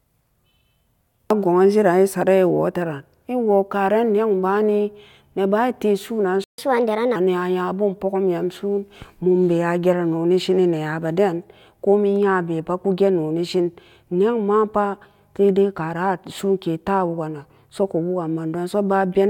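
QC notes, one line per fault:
6.44–6.58 s, playback stall: the speech cuts out mid-flow for about 144 ms and the output drops to silence before resuming where it left off. A gap this short and clean most likely comes from the player running dry of buffered data or having its output thread blocked, rather than from anything in the recording. On a waveform it shows as a flat silent strip, and on a spectrogram as a blank vertical band across all frequencies, with the energy on either side cut off sharply.
6.58–7.16 s, catch-up at higher speed: right after the gap the speech runs at 1.25 times normal speed for a little over half a second, sounding hurried and raised in pitch by roughly four semitones, then settles back. The player is resampling its backlog faster to win back the time lost in the stall, so tempo and pitch rise together. A spectrogram shows harmonics and formants shifted upward and syllables compressed in time, then dropping back to their usual spacing at 7.16 s.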